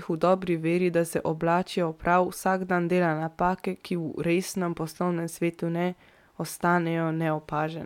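No technical faults are audible.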